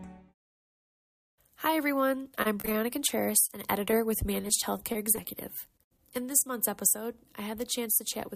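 Repeated packet loss (robotic sound) affects 2.23 to 6.30 s: nineteen gaps, the longest 28 ms, are each filled by stretching the preceding audio, leaving it choppy with pieces missing.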